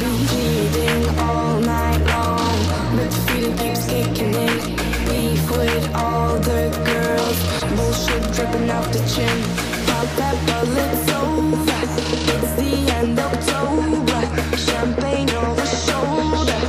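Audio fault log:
7.59 to 7.62 s, corrupt frame decoded: a short blip of roughly 40 ms, peaking around -10 dBFS. It sounds like one damaged compressed frame that the decoder played anyway, with misread codes throwing energy into the wrong frequencies, so it squeaks out of nowhere.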